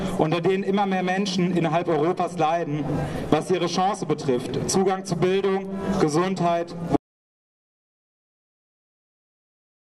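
At 6.96 s the input signal was likely lost, through a disconnected device, a failed link or an accidental mute, while recording carried on writing silence. The result is an audio dropout to silence: the sound cuts off abruptly and dead silence, without room tone, runs to the end.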